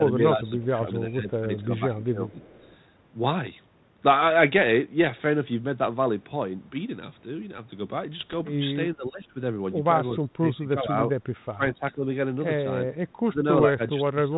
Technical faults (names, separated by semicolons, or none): speech suppressed in double talk; echo leak; bit errors on an ADPCM link